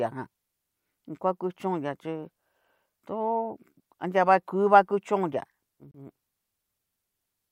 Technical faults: Bluetooth dropout

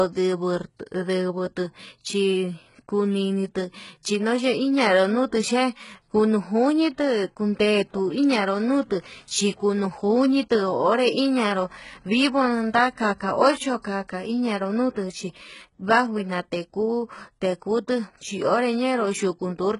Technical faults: HE-AAC compression

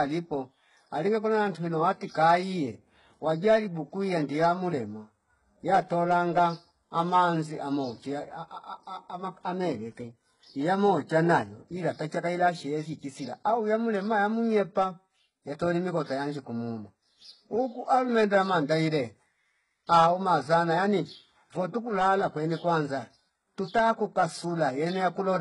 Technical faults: HE-AAC compression

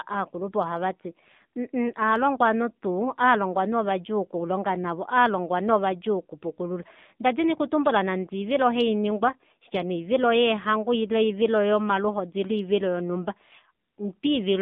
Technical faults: AMR narrowband mobile codec

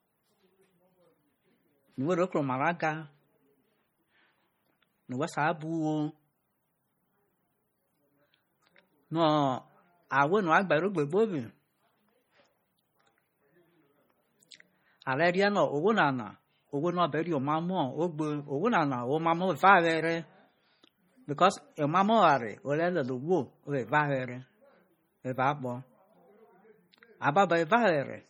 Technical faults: MP3 compression

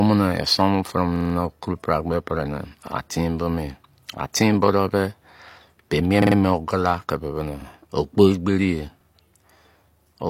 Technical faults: repeated buffer

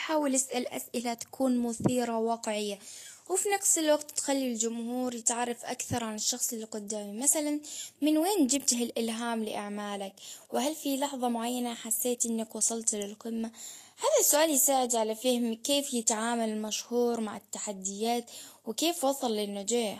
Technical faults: Vorbis compression

